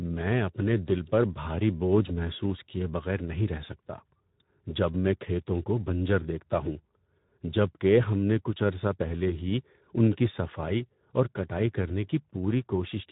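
Throughout, Speex codec coding leaves the speech hoarse and noisy; the spectrogram shows a hard ceiling at 3.8 kHz, which fits a low, roughly 11 kbps setting.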